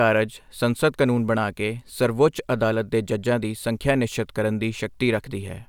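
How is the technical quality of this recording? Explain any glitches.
No technical faults can be heard anywhere in the recording.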